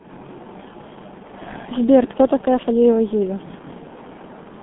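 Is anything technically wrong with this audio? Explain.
Yes. Throughout, the speech sounds muffled and hoarse, with smeared consonants and nothing above about 3.8 kHz. This is G.723.1 codec damage: a narrow 200 Hz to 3.5 kHz band and 30 ms frames at a rate that fits roughly 6 kbit/s, so the coarse, slowly updated voice model blurs fast detail.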